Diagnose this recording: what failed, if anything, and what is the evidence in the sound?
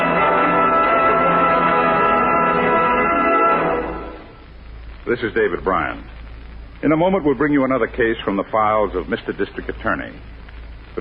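Network and codec stage: an adaptive stream starting at a low bitrate. From 0.0 to 6.0 s the treble is missing and codec artefacts are stronger, consistent with a rendition near 24 kbit/s AAC. At 6.0 s quality steps up abruptly, with no gap, fitting a switch to roughly 96 kbit/s once throughput was measured.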